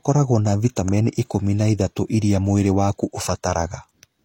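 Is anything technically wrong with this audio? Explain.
Yes. CD scratch ticks occur from 0.87 to 1.27 s, just before "na ithatũ iria mwĩrĩ". A disc blemish defeats error correction. Three brief ticks, the longest about a millisecond, result.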